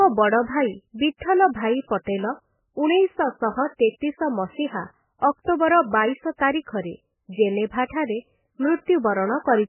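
MP3 compression runs through the whole recording, likely from encoding at a very low bitrate, around 8 kbps. The speech has nothing above 3 kHz, so it sounds dull and boxy. Weak frequency components flicker in and out between frames, leaving a heavy watery, swirling texture and smeared consonants.

Pre-echo appears at 2.04 to 2.07 s. A sharp onset lands late in a transform block, and the quantisation noise sized for that loud moment spreads back over the 33 ms before it. A brief hiss leads into the attack, which sounds softened and blurred.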